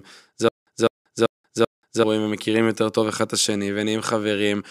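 From 0.49 s to 2.04 s the speech falls into a stutter with silent gaps. A fragment of about 204 ms plays, then about 183 ms of dead digital silence follows. The same fragment returns four times, once every 387 ms, at a steady mechanical pace. The cause is likely a stalled player or stream that replayed its last buffered piece at each retry. The speech that belonged in that span never arrives.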